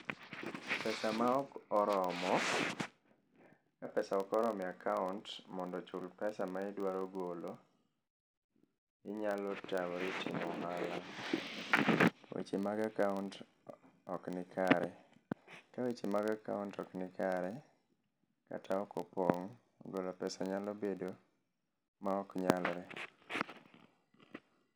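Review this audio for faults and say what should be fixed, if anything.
A filter restarted on every block: the filter clears its stored state at each block boundary, so every block starts from silence and opens with a small transient. Across the whole speech clip this is heard as a steady buzz at about 43.1 Hz, which fits a 1024-sample block, rising and falling with the loudness of the speech. To prevent it, keep the filter's state between blocks instead of resetting it.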